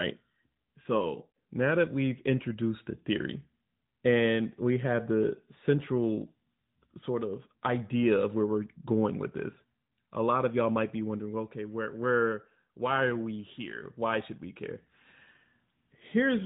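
No technical faults turn up anywhere in this speech recording. The AMR narrowband mobile codec path is working normally at 12.2 kbps, and what it leaves audible is a light telephone-band character with nothing above about 3.8 kHz.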